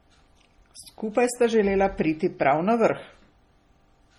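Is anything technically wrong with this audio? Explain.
Yes. Throughout the speech there is a layered, smeared graininess: swirly, watery artefacts sit on top of a second, differently textured roughness, with content reaching up to about 20.2 kHz and nothing above it. This is likely transcoding between lossy codecs. The sound points to a low-rate MP3 stage near 32 kbit/s, later re-encoded as HE-AAC near 48 kbit/s. The second encoder spent its bits reproducing the first one's damage and then added its own, so both sets of artefacts are heard together.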